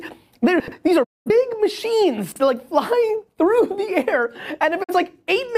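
At 0.60 s the sound jumbles for 0.12 s. This is chunks out of order: a 40 ms block was delivered two blocks late, so it plays after the two that should follow it. The same happens at 2.32 s, where a chunk arrives one block late and the passage runs to 2.40 s. Nothing goes missing in either spot. You hear a scrambled stutter at the hard joins, not a gap. That is how to tell it from a dropout.

At 1.03 s a digital broadcast dropout mutes the audio until 1.30 s. The receiver stopped getting valid frames and went silent instead of playing damaged data. The 20 ms fade in and out softens the edges. About 0.21 s of programme is simply lost, which points to roughly five missing frames. A shorter hole of the same kind runs from 4.82 to 4.94 s and loses about 43 ms, consistent with a single frame. Unlike the reordering faults, these are true silences, and the sound picks up later without anything being repeated.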